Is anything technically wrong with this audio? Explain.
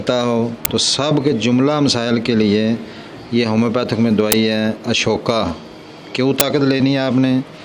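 Yes. At 0.65, 4.32 and 6.40 s there are uninitialised buffer faults: roughly 11 ms blocks, which fits a 512-sample buffer, were played before audio was written into them, so stale memory came out as samples, heard as brief, loud cracks.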